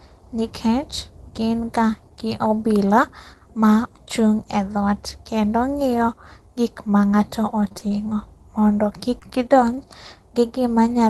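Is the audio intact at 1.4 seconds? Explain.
Yes, the speech at 1.4 seconds comes through intact, with no dropout, glitch or other fault at that moment.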